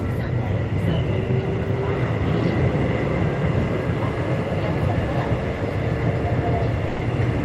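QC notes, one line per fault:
6.87–6.99 s, sound dropped by the voice detector: for about 120 ms near the end, the sound gives way to a short stretch of steady noise or near silence, then resumes when the signal picks up again. The likely cause is the sender's voice activity detector classing this passage as background and halting transmission, so the receiver filled the gap with comfort noise. The behaviour points to discontinuous transmission as used in Opus.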